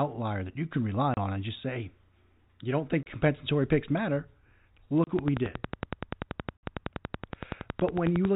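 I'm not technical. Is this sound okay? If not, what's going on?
No. Packet loss filled with silence: at 1.14, 3.03 and 5.04 s the speech drops out for 30 ms, first between "that you can rely" and "on and just say", then after "you don't think". At 6.58 s a 60 ms gap follows. Chunks of audio went missing in transit and silence replaced them, leaving hard-edged holes that fit the loss of single 30 ms packets, and a pair at 6.58 s.

Train of clicks: from 5.19 to 8.26 s there is steady ticking, about 11 clicks a second at an even pace, roughly thirty in all, each standing out well above the speech. The likely cause is electrical interference or a faulty connection or power supply injecting the same pulse over and over.

The speech itself has the narrow, phone-call sound of G.711 telephone coding, which sounds as expected here.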